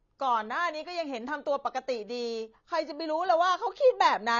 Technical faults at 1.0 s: AAC compression

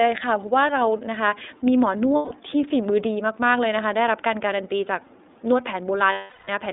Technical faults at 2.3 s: iLBC codec; lost iLBC frames

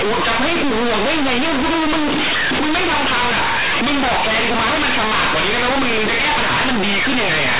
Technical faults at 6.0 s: companded audio read as linear

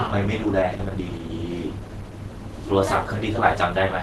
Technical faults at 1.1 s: Opus compression

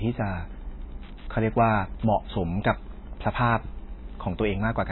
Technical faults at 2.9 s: Wi-Fi interference; MP3 compression

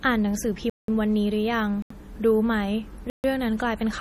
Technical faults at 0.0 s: MP3 compression

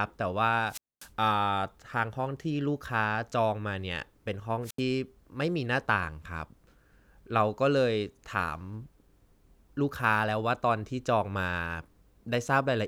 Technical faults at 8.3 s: none

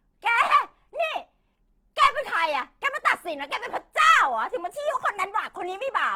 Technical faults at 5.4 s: Opus compression; drift correction step

